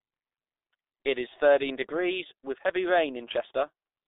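Muffled, hoarse speech runs through the whole clip. Consonants smear together, nothing is audible above about 3.8 kHz, and the low end thins out below roughly 300 Hz. This is heavy damage from the G.723.1 codec. It confines speech to a narrow telephone band and rebuilds it from a coarse voice model that changes only once per 30 ms frame. The sound fits a bitrate near 6 kbit/s and accounts for the blurred, rasping texture.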